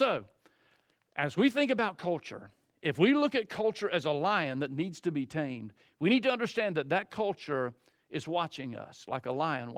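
No technical faults can be heard in this speech, and the Opus voice compression it passes through leaves only light coding traces.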